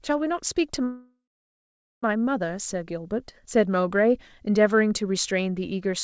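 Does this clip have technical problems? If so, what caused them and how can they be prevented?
Yes. From 0.84 s to 2.04 s the speech stops, a fading buzz follows, then about 0.8 s of silence. This is a call audio freeze, likely from delayed packets draining the jitter buffer. Speech resumes where it stopped, so nothing is lost, only delayed. A steadier network path or deeper jitter buffer prevents it.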